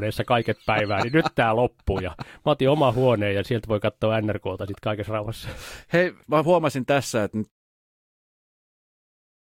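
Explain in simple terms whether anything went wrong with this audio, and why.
Compressed frames skipped, at about 1.92 s, right after "päivää niin nyt tämä". The speech is stored as a series of small compressed chunks, and here roughly one chunk, about 20 ms of sound, never got played, either because it was missing or because the decoder rejected it as damaged. The speech jumps forward by that amount. The gentle fade-out near 7.5 s is intentional.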